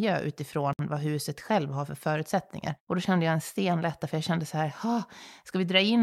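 At 0.73 s the speech drops into a gap at a join of encoded pieces, about 61 ms of silence before "vad huset själv har" resumes mid-flow. Separately encoded segments were spliced untrimmed, keeping encoder delay and padding. Waveform shows a flat hole; spectrogram, a blank vertical stripe with smeared edges.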